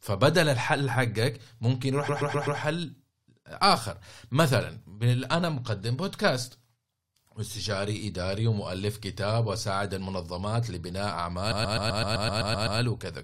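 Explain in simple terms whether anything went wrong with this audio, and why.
Repeated frames, from 2.08 to 2.59 s and from 11.51 to 12.79 s: the same 128 ms slice of speech plays again and again, four extra times and then ten, as a stutter. A stored or transmitted chunk was duplicated, adding 0.51 s and 1.28 s.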